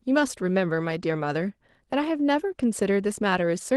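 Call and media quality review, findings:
No faults found in this speech clip. The call path is audible as a roll-off above about 12 kHz with coding texture, which fits Opus at around 24 kbps.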